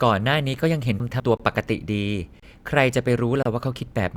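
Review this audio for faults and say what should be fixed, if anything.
Chunks out of order at 1.0 to 1.2 s: two 100 ms blocks of speech play swapped, with the first written one chunk late. Nothing is missing, but the reversed order garbles that moment and leaves three hard joins. To prevent it, reorder chunks by sequence number before writing or playback.

Gap between stream segments at 1.37 to 1.40 s, 2.40 to 2.43 s and 3.43 to 3.46 s: silent holes of 23 ms, 28 ms and 30 ms with abrupt edges recur about once a second. This points to one-second segments whose timestamps don't meet, so the player fills the space with silence. To prevent it, make each segment's start time equal the previous segment's end.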